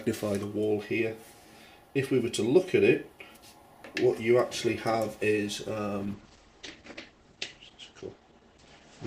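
At 6.03 s a call bitrate drop sets in and lasts to the end at 9.07 s. The encoder falls from 128 to 11 kbps, narrowing the band from 20 kHz to 8 kHz. Unlike a simple low-pass filter, the sound turns rough, watery or muffled, without dropouts.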